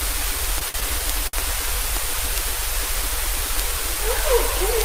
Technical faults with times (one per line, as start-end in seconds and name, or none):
0.59-0.76 short stall from a late packet
1.27-1.35 short stall from a late packet